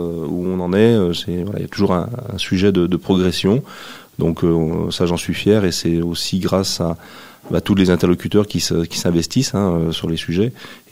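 No technical faults can be heard anywhere in this audio.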